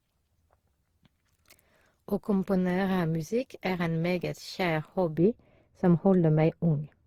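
Throughout, the speech sounds swirly, smeared and hollow, with blurred consonant attacks. That is likely generation loss, repeated lossy re-encoding that points to about seven passes through Opus at around 48 kbit/s, with smudged onsets. From 5.18 s to the end, de-emphasis was applied wrongly: a smooth treble roll-off of about 11 dB at 10 kHz muffles the sound, visibly darkening the spectrogram's upper bands.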